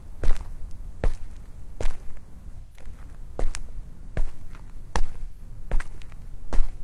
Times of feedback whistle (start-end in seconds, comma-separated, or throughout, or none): none